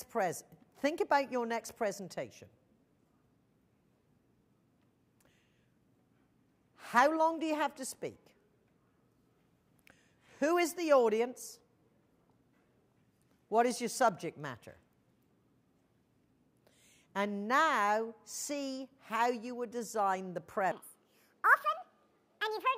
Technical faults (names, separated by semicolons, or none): section at the wrong speed